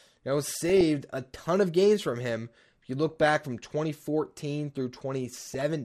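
The whole clip sounds dull and plainly gurgly, with upper bands dropping out, most likely MP2 compression at a low rate, roughly 80 kbps. DAB burbling bubbles up at 0.69–0.81 s, 3.09–3.29 s and 5.47–5.61 s, where bit errors under one percent corrupt the sub-band data across six to nine frames, giving brief blips of noise in single sub-bands.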